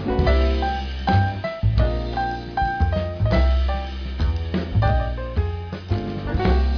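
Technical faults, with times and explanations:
No technical faults detected.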